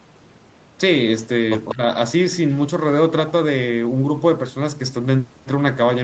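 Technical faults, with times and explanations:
1.21–1.26 s and 1.69–1.75 s, echo leak: two brief scraps of a delayed copy of the speech, trailing it by 193 ms. The first is barely audible, roughly 40 dB down; the second is much stronger, only about 10 dB under. Likely a speakerphone echo canceller letting some of its pickup through.
1.74–1.86 s, speech suppressed in double talk: just as that louder echo lands, the speech ducks by up to about 15 dB for roughly 100 ms in total. The canceller likely couldn't separate the talker from the echo, so it pulled both down.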